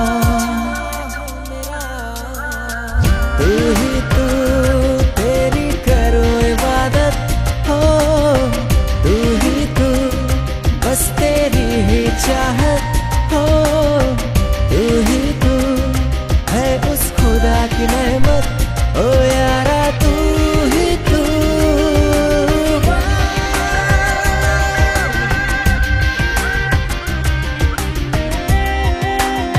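The audio is dull throughout, with a gurgling, granular texture and upper frequencies that flicker in and out. This plainly audible damage is most likely MP2 compression, where MPEG Layer II divides the spectrum into 32 sub-bands and, short of bits, shuts off the top ones and coarsely quantises the rest. The result fits a rate around 80 kbps. Unlike broadband hiss or a plain low-pass, the loss shifts from moment to moment, band by band. From 18.20 to 18.60 s there is a phantom power thump, a deep low-frequency thud that dies away with a decay of about 89 ms. It comes from a supply being switched on a live input, with the voltage step pushed through the coupling capacitors. Its smooth, sub-heavy decay sets it apart from a handling knock or a plosive, which carry more midrange and an irregular tail. At 23.54 s a very short DAB burbling event appears: a brief cluster of watery blips confined to individual sub-bands, pointing to a handful of corrupted frames and a low bit error rate. 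Here bit errors that slipped past error correction into the MP2 data produced wrong values. What separates it from the constant codec gurgle is that it is a sudden, isolated outbreak of blips rather than a steady texture.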